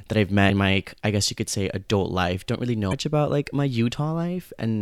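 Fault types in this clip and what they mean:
Damaged data in a compressed stream: at 0.46 s and 2.89 s, corrupted frames knock the decoder out of sync, leaving brief 44 ms glitches.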